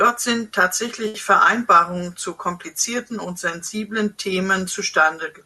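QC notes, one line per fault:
1.07–1.16 s, short stall from a late packet: the speech briefly hangs with a slight buzz as the receiver stretched sound for 70 ms until the delayed packet arrived, losing nothing.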